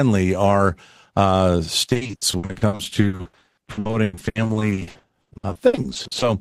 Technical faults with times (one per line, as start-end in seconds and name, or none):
1.89-6.23 repeated packet loss (robotic sound)